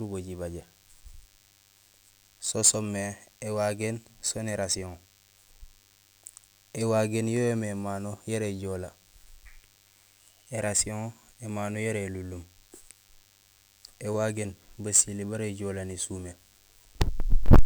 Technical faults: DECT cordless phone buzz

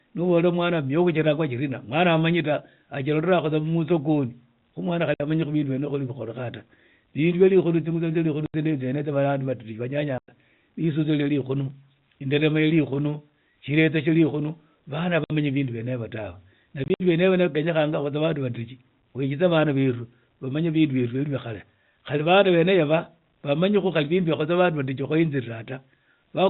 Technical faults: packet loss filled with silence

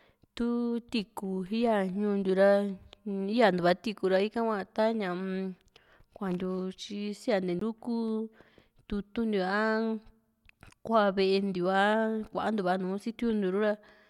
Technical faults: CD skip

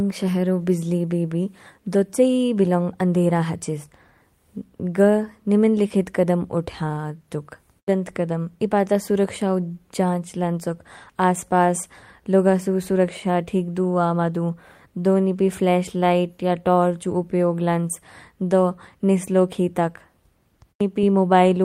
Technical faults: none

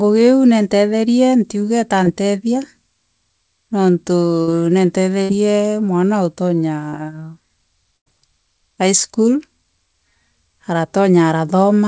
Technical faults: short concealed packet loss; burst of packet loss

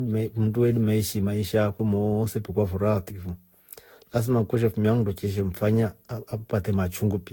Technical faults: generation loss

